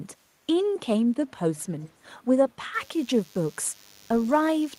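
Speech, and two things go wrong in it. From 1.57 to 1.92 s you can hear a faint delayed copy of the talker coming back about 271 ms late, sitting roughly 30 dB under the live speech. That's an echo leak, most likely from a far end on speakerphone whose echo canceller let some of its own loudspeaker pickup slip through and sent it back down the line. Then from 2.74 s to the end there's a steady thin buzz at 100 Hz with a stack of harmonics, at about 30 dB below the signal. That's classic DECT cordless phone buzz: a nearby handset or base fires a radio burst every 10 ms, and the audio circuitry rectifies it into that repeating tone.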